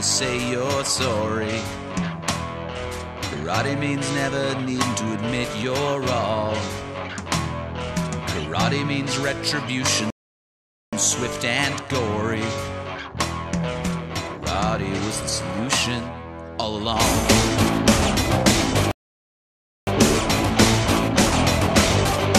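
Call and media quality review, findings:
Rebuffering stall, 10.10–10.93 s and 18.91–19.87 s. Sound drops to silence, then resumes exactly where it stopped, with nothing skipped. Player buffer ran dry and waited on delivery, adding about 0.82 s and 0.96 s.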